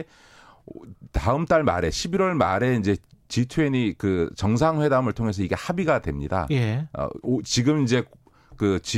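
Clock slip clicks run from 1.03 s to 8.22 s: faint ticks about once a second, around seven in all, riding on the speech. The likely cause is two devices running on unsynchronised clocks that differ by roughly 20 parts per million, so each time the drift adds up to a whole sample, one is dropped or repeated. Each tick is tiny and sharp, consistent with a single-sample jump, and stands out most on louder, sustained stretches.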